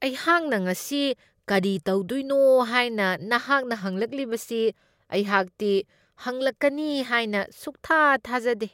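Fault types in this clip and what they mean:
No faults can be heard.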